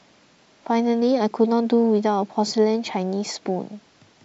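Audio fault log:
Nothing to log here: this bit of speech comes through without a single technical fault turning up anywhere.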